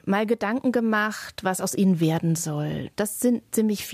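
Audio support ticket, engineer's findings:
No audible defects found on the speech clip; nothing to attribute to any component, no action required.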